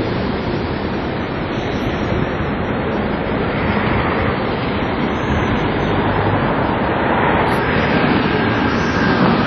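A recording of everyday sound likely passed through WMA compression at a low bitrate, the heavy damage fitting roughly 32 kbps: quantisation noise smears across long transform blocks, so it rings and washes with a hiss pumping alongside the sound, and nothing survives above 13.5 kHz.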